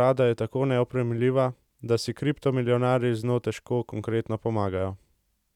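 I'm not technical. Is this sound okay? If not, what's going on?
Yes, nothing wrong turns up anywhere in this speech recording, so there's nothing to fix.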